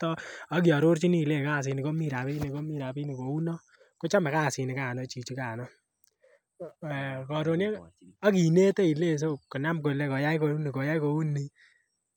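No technical faults can be heard anywhere in this recording.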